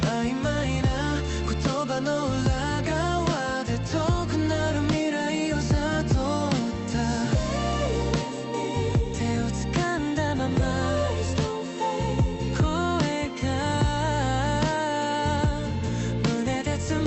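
No faults are audible; the top end stops near 8 kHz, consistent with an Opus call path at around 32 kbps, which is working as expected.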